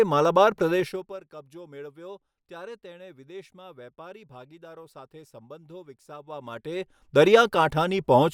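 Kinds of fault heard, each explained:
Zipper noise: the speech level is moved in discrete jumps rather than a continuous glide, so each jump leaves a small click and the fade takes on a rapid ticking texture. From 0.76 to 1.2 s the level drops around 20 dB in 2 dB steps, and from 6.2 to 7.24 s it climbs back about 20 dB in 1 dB steps, both at roughly 30 steps a second. On a waveform the envelope looks like a staircase. A spectrogram shows thin vertical broadband lines at each step.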